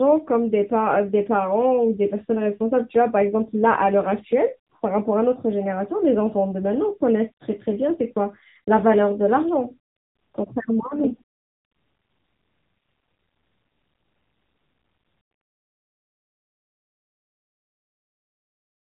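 Throughout the speech, AMR narrowband mobile codec damage plainly buzzes and sounds synthetic, which fits a low mode near 8 kbps. A spectrogram shows a hard ceiling at 3.8 kHz.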